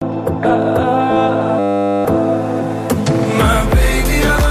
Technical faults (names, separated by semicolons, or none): system hang loop